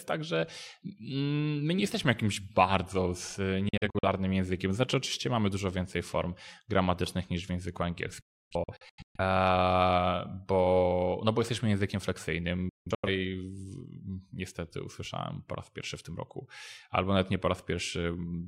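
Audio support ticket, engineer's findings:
Digital broadcast dropouts at 3.69, 8.21 and 12.69 s: receiver muting on bad frames, brief fades into scattered silent holes, worst near 8.21 s (about 0.6 s lost). Content gone.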